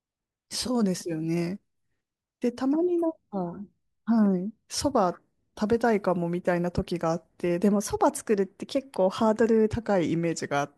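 Speech, with a wrong sample rate fault from 7.72 to 9.70 s. There the voice turns quicker and higher. It runs about 1.09 times too fast and sits 1.47 semitones sharp. That fits 44.1 kHz material played at 48 kHz without conversion.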